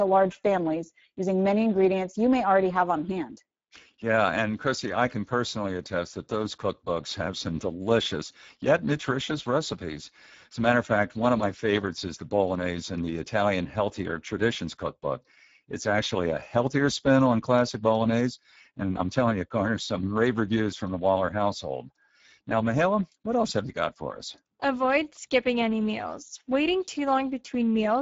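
Speex codec damage runs throughout the speech, from start to finish. This CELP codec rebuilds the voice from a predicted vocal-tract filter plus a coded excitation signal. Here the excitation is starved of bits, which fits a bitrate near 10 kbps, so the speech comes through plainly coarse and hoarse, with a grainy, noisy texture. The band is also capped: nothing remains above 7.7 kHz, which dulls the top end.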